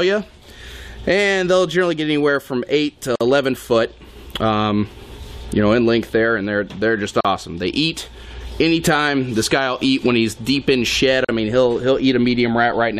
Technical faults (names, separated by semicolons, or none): gap at a join of encoded pieces